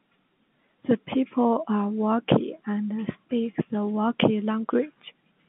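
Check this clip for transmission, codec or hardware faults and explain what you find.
Nothing here sounds amiss: the speech simply has the narrow, phone-line character of G.711 telephone coding, with the band running from about 150 Hz to 3.6 kHz, which is just what a working telephone channel sounds like.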